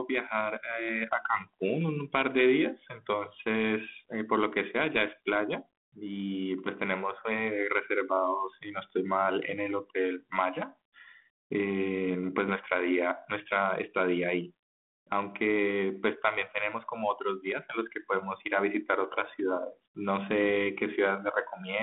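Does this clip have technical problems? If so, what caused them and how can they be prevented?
Yes, pre-emphasis left on from 0 to 5.3 s: a 75 µs FM-style treble boost, about 13 dB at 10 kHz, was never de-emphasised, so it sounds thin and hissy. Apply the matching de-emphasis filter wherever pre-emphasis is used.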